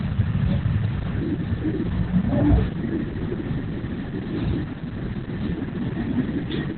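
Opus voice compression runs from start to finish, with the codec working in its SILK linear-prediction mode and held to narrowband. Nothing survives above about 4.3 kHz, and the coarse excitation coding points to a very low bitrate, around 8 kbps. The damage is heavy: the speech sounds muffled and telephone-like, with a hoarse, slightly robotic texture where the fine detail of each sound has been replaced by a rough approximation.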